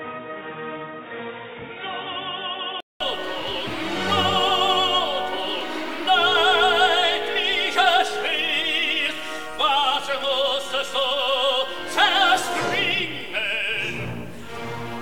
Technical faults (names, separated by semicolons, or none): input switched to a poorer device